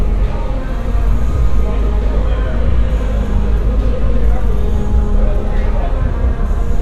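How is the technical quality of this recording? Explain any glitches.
The technical quality is poor, with plainly audible compression damage from start to finish. The likely cause is MP2 compression at a low rate, one that fits about 80 kbps. The encoder divides the sound into 32 equal sub-bands and rations bits among them. With so few bits, the upper bands drop out entirely and come and go, while the remaining bands are quantised coarsely. The result is a dull, muffled top end with a gurgling, grainy distortion throughout.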